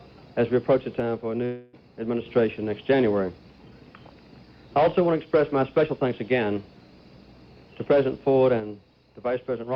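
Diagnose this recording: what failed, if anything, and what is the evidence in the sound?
At 1.00 s the level falls abruptly by about 6 dB and recovers at 2.26 s. It falls the same way again at 8.60 s and stays down to the end. The tone and balance do not change. The likely cause is one channel drops out of a stereo feed at the wiring, connector or driver stage, so the mono sum loses half its contribution. On the waveform the envelope steps down to half amplitude. A spectrogram dims evenly across all frequencies.

From 1.45 s to 1.75 s, inside that first low-level stretch, the sound is replaced by a continuation of what came just before. It decays as a fading buzz or hiss with no true silence. About 0.28 s of material is missing, and the audio resumes further on. This points to the network stage, likely a long network dropout that the receiver concealed. A spectrogram shows a smeared, repeating band fading out and then a discontinuity. 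The waveform shows a decaying, repetitive pattern.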